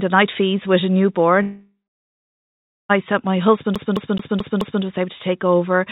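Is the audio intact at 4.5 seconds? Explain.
No. At 4.5 seconds the speech is caught in a CD stuck on one turn, running from 3.75 to 4.83 s. A scratch keeps kicking the laser back one track at the same point of each revolution, so a single 0.22 s slice of speech plays five times, with a brief mute at every jump. The result is a rapid, evenly spaced stutter instead of continuous speech.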